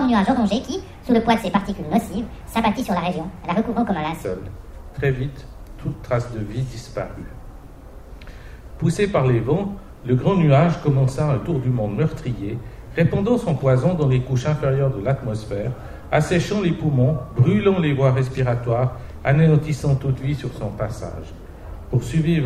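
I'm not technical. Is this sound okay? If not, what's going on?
No, the first 4.2 seconds have a section at the wrong speed, about 1.54 times too fast, so the sound is hurried and roughly seven semitones high, likely from a wrong playback clock.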